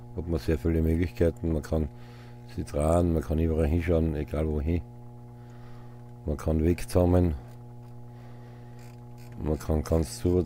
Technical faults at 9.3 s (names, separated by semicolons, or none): mains hum